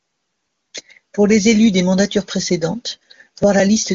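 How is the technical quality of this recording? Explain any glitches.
The technical quality holds up well, and there are no glitches to explain.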